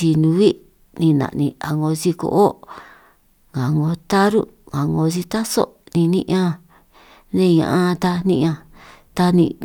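Speech recording with no audible technical faults detected.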